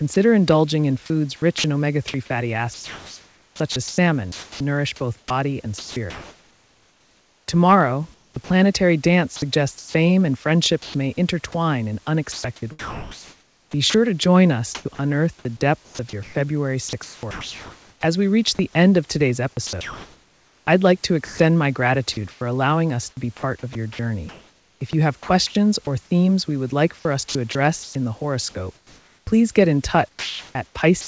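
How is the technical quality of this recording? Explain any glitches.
The recording is choppy for most of its length. The speech keeps dropping out. The audio also stops at about 8 kHz, which fits a G.722 call path at 64 kbps. Faint room noise sits about 38 dB below the speech.

The sound is chopped by the voice detector from 0.14 to 25.55 s, ending just before "or themes we would". It happens again from 27.29 to 31.07 s, starting just after "would like for us". The first stretch loses about 8.5 s of sound, and the second loses about 1.38 s. The likely cause is the sender's voice detector flipping repeatedly between sending and pausing. In the pauses, generated comfort noise stands in for quiet syllables and word edges. You hear clipped speech.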